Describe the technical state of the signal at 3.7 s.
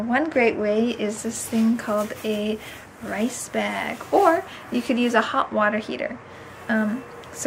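At 3.7 s the signal is intact, with no dropout, click, distortion or other fault audible at that moment.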